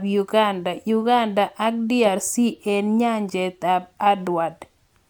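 No technical faults can be heard in this recording.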